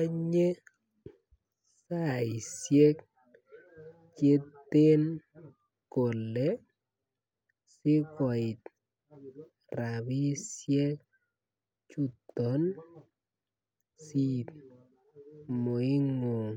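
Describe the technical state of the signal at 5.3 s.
At 5.3 s the signal is intact, with no audible technical fault at that moment.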